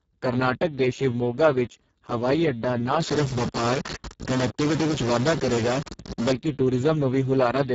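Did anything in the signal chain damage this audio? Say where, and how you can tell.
Yes. Speex codec damage runs through the whole speech clip: the voice sounds hoarse and noisy, with nothing above 7.7 kHz. That fits a low-bitrate Speex encode near 5.8 kbps at the codec stage, where too few bits describe the excitation.

A stuck bit is the likely cause of distortion from 3.00 to 6.33 s, starting just after "ਵਿੱਚ ਹਵਾਈ ਅੱਡਾ ਨਾ". It points to a converter or wiring fault: one data bit is held fixed, so about half the samples are off by that bit's weight.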